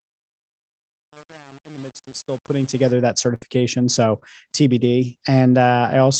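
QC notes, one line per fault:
0.00–2.92 s, truncation distortion on a fade: The fade runs through a gain stage that keeps only about 7 bits and adds no dither. While the level is low, the waveform collapses into coarse steps, so the speech sounds gritty.
2.09–2.13 s and 4.19–4.23 s, short concealed packet loss: Each event lost about 20 ms of audio. The receiver bridged each hole with roughly 20 ms of extrapolated sound, continuing the previous pitch or shaped noise, then blended back. Each is heard as a brief smear or wobble.
3.35–3.43 s, burst of packet loss: About 60 ms of consecutive audio never arrived in time. Concealment held the last sound for about 60 ms and faded it, giving a short buzz or hiss. Speech then resumes further on, and the part in between is lost.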